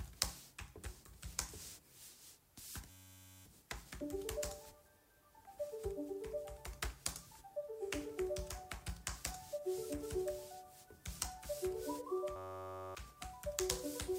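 At 2.90 to 3.46 s, and again at 12.36 to 12.95 s, there's a system hang loop. The machine stalled while the hardware kept replaying one 10.67 ms chunk, which fits a 512-sample buffer. It comes out as a steady 93.8 Hz buzz, and about half a second of sound goes missing each time.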